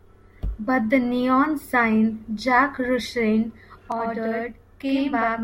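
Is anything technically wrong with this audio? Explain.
Yes. From 3.92 s to the end at 5.43 s, a channel delay (doubling) appears. One channel lags the other by 85 ms, which fits a 4096-sample buffer, and the two are summed to mono. Unlike room reverb's decaying tail, the speech sounds doubled by one slap echo at equal level.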